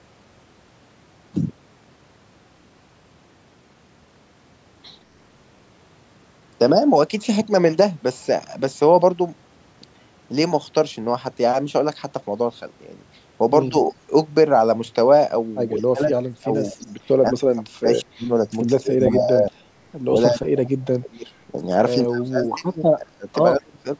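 From 13.70 to 13.75 s the speech briefly dips by about 15 dB, then it sinks again at 15.79–18.31, 18.82–19.5, 20.12–21.6, 22.06–23.27 and 23.58–23.85 s, sometimes by as much as 30 dB. That's speech suppressed in double talk, likely an echo canceller ducking this talker while the far side speaks. Inside that stretch, from 16.56 to 16.87 s, there's a faint echo leak: a copy of the voice trailing by 179 ms, roughly 30 dB down, likely where the canceller let some loudspeaker pickup slip back through.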